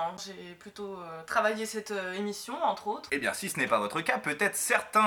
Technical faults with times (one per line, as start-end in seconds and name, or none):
none